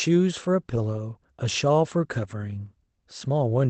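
At 0.91 to 0.97 s and again at 2.23 to 2.33 s, packets were lost in transit, and the decoder filled each hole with the lower-bitrate copy carried in the next packet. This is a lost packet rebuilt from error correction. There is no silence or dropout. Instead, the speech turns briefly rougher and noisier, for about 40 ms and then 60 ms, which fits two and then three 20 ms packets.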